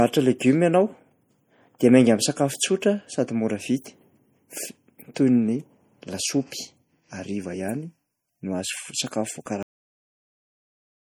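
The clip is speech with plainly audible codec damage throughout that is likely MP3 compression, which fits a low bitrate of around 48 kbps. When the encoder runs short of bits, it discards weaker frequency components, and those parts then flicker in and out from frame to frame, giving the speech a watery, swirling texture and smeared consonant onsets. On a spectrogram the upper bands look patchy and blocky, with energy appearing and vanishing in small time-frequency tiles, and there is nothing above about 21 kHz. Two dropped buffers (overruns) follow, at 8.28 s and 9.46 s. In each, a short stretch of audio, about 10 ms at the first and about 5 ms at the second, was lost, likely because it wasn't read out before being overwritten, so the sound jumps ahead with no gap. A waveform shows an abrupt discontinuity at each point, and a spectrogram shows a thin vertical seam where the two sides meet. 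Finally, the clip has a cut-off end at 9.63 s. The last stretch of audio was never written out, so the speech stops mid-sound and drops straight to silence for the remaining second and a half, with no natural decay. The waveform shows the signal ending sharply, and the spectrogram goes blank from that moment to the end.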